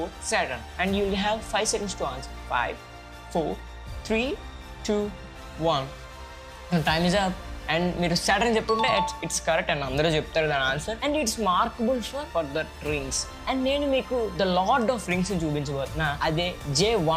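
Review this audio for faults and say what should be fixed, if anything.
At 3.60 s the sound jumps forward, with no gap and roughly 15 ms missing. This is likely a dropped buffer (overrun): the hardware overwrote samples before the software read them. The waveform shows an abrupt step discontinuity, and the spectrogram shows a thin vertical broadband line. A larger capture buffer or a higher-priority recording thread would prevent it.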